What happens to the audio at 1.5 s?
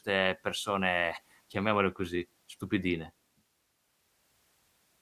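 Nothing goes wrong at 1.5 s; the speech there runs on intact, with no dropout, click or other fault.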